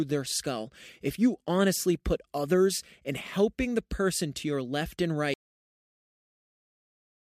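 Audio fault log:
5.34–7.23 s, cut-off end: straight after "to your left and" the speech halts mid-sound and the clip sits in digital silence to its close, because the final buffers were never written. Unlike a dropout, the audio never returns; unlike a fade-out, there is no decay.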